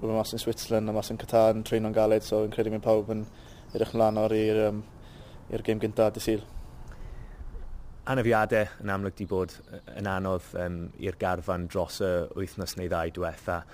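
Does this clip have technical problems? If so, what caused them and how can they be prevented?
Yes. Throughout the clip there is imaging from sample-and-hold upsampling. The rate was raised by holding each sample until the next, with no smoothing filter afterward, which fits an original rate of 24 kHz taken up to 44.1 kHz. The stepped waveform leaves mirror copies of the spectrum, the first spanning 12 to 24 kHz at about 26 dB below the signal. These images track the sound's level and add a metallic fizz above the real content. To prevent this, resample with a proper interpolating converter whose low-pass filter removes everything above the original band.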